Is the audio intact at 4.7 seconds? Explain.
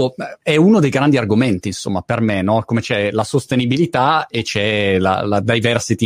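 Yes, the speech at 4.7 seconds plays through intact, with no audible fault at that moment.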